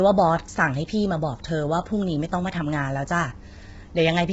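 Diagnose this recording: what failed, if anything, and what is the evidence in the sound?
The failure is at the codec stage: across the whole speech clip the voice sounds rough and grainy, with the character of heavy low-delay AAC compression, likely AAC-ELD at a low bitrate, around 16 kbps. At that bitrate the coder quantizes coarsely, so noise fills the gaps between the pitch harmonics and the top band is thrown away. On a spectrogram, the harmonic stripes look smeared and speckled with noise fill, and everything stops at a flat ceiling near 7.7 kHz.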